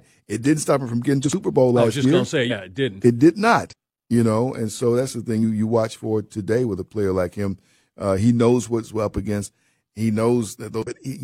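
It's a speech clip with compressed frames skipped five times, at 1.21 s after "stop him from getting", 2.47 s before "it didn't", 3.67 s before "you know", 5.39 s and 10.82 s. Whole frames never got decoded, so the audio leaps ahead, losing somewhere between a twentieth and a fifth of a second each time.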